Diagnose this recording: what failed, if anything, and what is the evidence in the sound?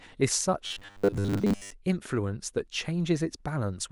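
From 0.67 s to 1.73 s the speech turns into robotic sound from repeated short buffers: a rigid, metallic buzz fixed at 100 Hz that still roughly tracks the words. The failure is likely at the driver or buffer stage. New audio arrived too seldom, so a segment of about 10 ms was replayed over and over, replacing most of the real signal in that stretch. On a spectrogram this shows as flat, evenly spaced harmonics at multiples of 100 Hz, and the waveform shows identical repeating cycles.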